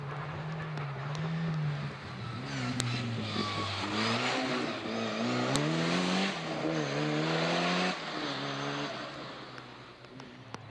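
Two sharp, loud clicks at 2.80 s and 5.56 s are a file header played as audio: separate WAV pieces were joined with their headers intact, so those header bytes play as samples. Unlike a random dropout click, it falls exactly where each new piece begins, whatever the signal is doing.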